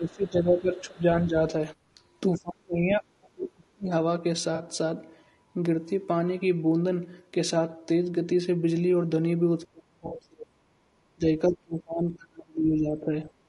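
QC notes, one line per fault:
Throughout, low-delay AAC compression: the encoder is likely AAC-ELD at a low rate, consistent with about 32 kbps. At this rate each low-delay frame gets few bits, so the bits run thin. The speech sounds plainly rough and grainy, with noise filling the gaps between harmonics and a top band that sounds dulled or synthetic rather than natural.
0.00–1.53 s, 1.95–2.00 s, 2.35–3.90 s, 9.65–10.60 s, 11.15–11.24 s and 11.49–13.33 s, speech suppressed in double talk: both ends appear to be talking at once, and the echo canceller, unable to separate the near talker from loudspeaker echo, pulls the level down. The talker's speech drops by about 15 dB, 10 dB, 35 dB, 40 dB, 30 dB and 35 dB respectively. The long runs are heard as the speech sinking or breaking up in pieces, and the short ones as brief dips.
4.55–4.61 s, 10.07–10.13 s and 12.13–12.17 s, AAC frame loss with concealment: audio data went missing, 40 ms, 40 ms and 20 ms, which fits whole 20 ms frames. 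The decoder patched each gap by reusing the last good spectrum with its detail scrambled. Each gap comes out as a short smeared, noisy blip instead of a dropout. The one at 10.07 s falls inside a suppressed stretch.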